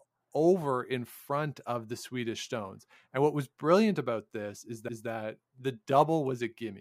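At 4.88 s there's a CD skip: the laser got knocked or hit a flaw and landed on a different turn of the spiral. You hear a brief tick, a mute of just a few milliseconds, and then the speech picks up from another spot.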